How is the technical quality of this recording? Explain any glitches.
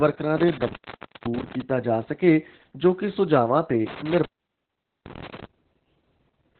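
Technical quality is poor, with one fault across the whole speech clip. Heavy Opus voice compression runs throughout. The sound points to a narrowband SILK mode at roughly 8 kbps: linear-prediction coding with coarsely quantised excitation leaves speech muffled, hoarse and faintly robotic. A spectrogram shows nothing above about 4.3 kHz, just a hard empty ceiling.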